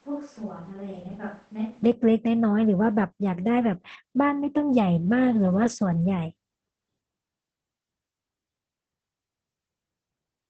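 Speech, carried throughout by Opus voice compression with plainly audible damage: nothing remains above about 8.4 kHz, the wideband limit of the SILK linear-prediction coder, and the coarsely coded excitation leaves the voice muffled, hoarse and faintly robotic, which fits a bitrate around 12 kbps. From the start until 1.83 s the sound is roomy and hollow, thin in the bass, about 10 dB quieter and with faint room noise, then it jumps to a close, direct sound. This is likely a switch to a distant microphone.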